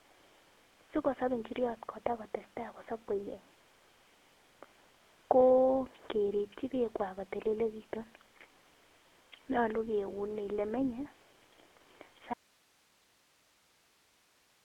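GSM full-rate codec damage runs throughout: the speech is rebuilt from a vocal-tract model driven by sparse pulses, giving a plainly buzzy, gravelly roughness, confined to roughly 250 Hz to 3.5 kHz with nothing above 3.8 kHz, consistent with a 13 kbps stream.

An audio dropout to a faint residue begins abruptly at 12.34 s and lasts to the end. The speech vanishes, leaving only hiss far below its level, likely because the signal was lost while the downstream path stayed live.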